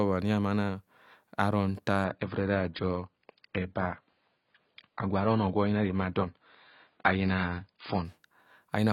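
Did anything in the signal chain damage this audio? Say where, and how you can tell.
Yes, at the network and codec stage, an adaptive stream at a lower bitrate. From 2.05 to 8.05 s the speech abruptly loses everything above 5.1 kHz and gets smeary, with no gap. That fits the player switching to a much leaner AAC rendition, around 16 kbit/s, then recovering.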